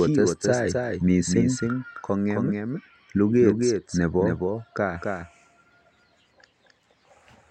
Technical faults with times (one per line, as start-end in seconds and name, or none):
0.00-7.50 doubled audio track